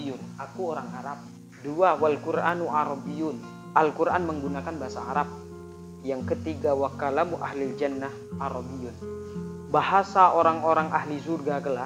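From 0.41 s to 11.84 s, sharp ticks recur at a steady pace of about one per second, roughly ten in all. These are word clock ticks: the receiving device runs unlocked, its clock drifting around 20 parts per million, so one sample is dropped or repeated at each slip.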